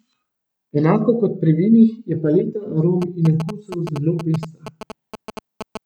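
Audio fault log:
3.02–5.77 s, GSM signalling bursts: a galloping dit-dit-dit of short buzzes rides under the speech. A nearby 2G phone exchanging signalling with the network sends brief groups of radio bursts, which the audio circuit rectifies into clicks repeating at about 217 Hz. On a spectrogram this shows as vertical striped clusters with a harmonic comb spaced at 217 Hz, and on the waveform as bunched rows of sharp spikes.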